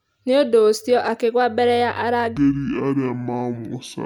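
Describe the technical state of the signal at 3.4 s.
At 3.4 s the signal sits inside a section at the wrong speed, running from 2.37 s, just after "mbere ya", to the end of the clip. That stretch plays at 0.571 times normal speed, so the speech drops by roughly ten semitones and drags, deep and slow. The likely cause is playback against a mismatched clock. On a spectrogram the harmonics and formants shift downward and smear out in time. In the waveform the cycles are visibly longer than before 2.37 s.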